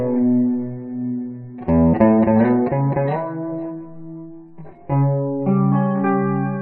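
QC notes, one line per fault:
3.08–6.61 s, channel delay (comb filtering): one channel lags the other by roughly 20 ms and the pair is summed to mono. Shared content cancels at evenly spaced frequencies, the first near 20 Hz and then about every 50 Hz, leaving a rough, slightly doubled sound until the end.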